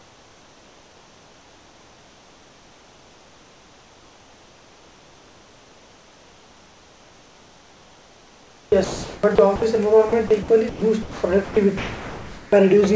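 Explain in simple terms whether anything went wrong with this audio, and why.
From 0.00 to 9.75 s and again from 10.09 to 12.52 s, the speech is chopped by the voice detector. About 9.2 s and then 1.3 s of sound are replaced by a soft synthetic hiss, likely because the sender kept switching transmission off and sending comfort noise instead.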